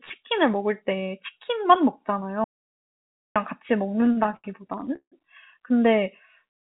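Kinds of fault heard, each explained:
Audio dropout to silence: The speech cuts to complete silence for about 0.91 s from 2.44 s, with no room tone, likely from lost input.
Repeated stalls (stutter): Between 3.96 and 5.14 s the jitter buffer keeps running dry. Repeated sound fills each pause, up to 160 ms, so speech drags.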